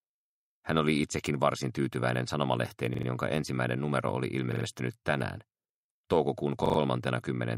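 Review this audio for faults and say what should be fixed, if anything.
Three repeated buffer faults occur, at 2.94 to 3.07 s, 4.52 to 4.65 s and 6.66 to 6.78 s. In each, a 43 ms slice plays three extra times with a hard join at every repeat, giving a brief rhythmic stutter. That length fits a 2048-sample buffer that was replayed because fresh audio arrived late. Unlike a dropout, there is no silence and no audio seems to be skipped. Unlike an echo, the copies are identical and butt-joined rather than delayed and decaying. To prevent it, keep the audio thread fed ahead of playback with higher priority or a larger buffer.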